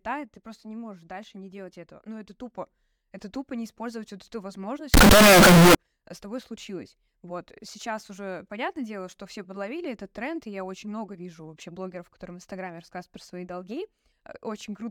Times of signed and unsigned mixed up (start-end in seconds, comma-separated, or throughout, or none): 4.94-5.75